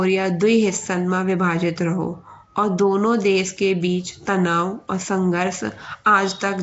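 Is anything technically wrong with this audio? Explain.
Yes. The speech carries a rough, hissy halo and a smeared underwater feel throughout, with nothing above 7.7 kHz. That's likely Nellymoser compression, which starves weak bands and fills them with noise.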